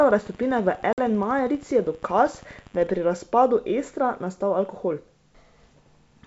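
A speech clip carried over a wideband call, clear up to about 7 kHz, with one clear case of packet loss on an ADPCM call. At 0.93 to 1.02 s the sound drops into a hard-edged silent hole about 50 ms long. That fits a handful of lost packets. When the speech returns, it comes back with brief distortion. The decoder's predictor and step size have drifted from the sender's. They take some tens of milliseconds to settle.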